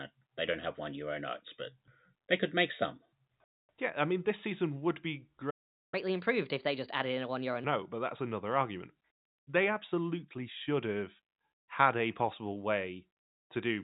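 At 5.50 s the speech cuts to silence in mid-flow and stays silent until 5.94 s, a gap of about 0.42 s. This is a playback stall: output stopped because the player had nothing to send, most likely because its buffer ran dry or its thread was held up. The listener hears a hard dropout.

Immediately after the gap, from 5.94 s to 7.64 s, the player works through its backlog as catch-up at higher speed. It resamples the audio to run at 1.25 times normal rate, so timing tightens and pitch rises by about four semitones, giving the speech a hurried, raised quality. At 7.64 s the delay has been fully recovered and speed and pitch drop back to normal. Throughout, the band stops below 4 kHz, as expected from the G.711 mu-law telephone path the audio passes through.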